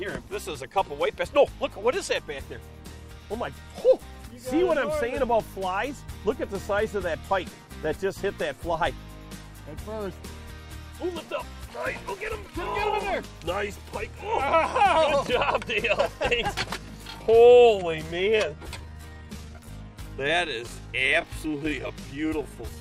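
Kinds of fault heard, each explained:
Time-stretched section: from 16.75 s to the end at 22.80 s the pace drops abruptly to about 0.7 times normal speed while the pitch stays where it was, and the slowed audio drags. The likely cause is software lengthening this part to fit a duration by repeating short slices of the sound. A plain slowdown from resampling or a dragging tape would pull the pitch down with the tempo; here it stays fixed.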